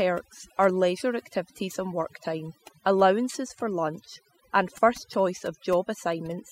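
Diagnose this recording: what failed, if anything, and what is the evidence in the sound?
Overdone noise removal runs through the whole clip, a call-processing fault. The suppressor was set too aggressive, pulling frequency bands near its noise estimate down to nothing. The background drops and breaks up into twinkling specks, and quieter parts of the speech vanish.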